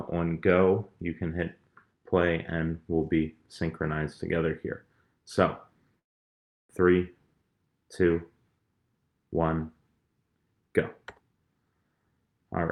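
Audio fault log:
5.99–6.71 s long network dropout: about 0.7 s of silence, then sound resumes with that stretch missing, not paused; likely a stalled network stream.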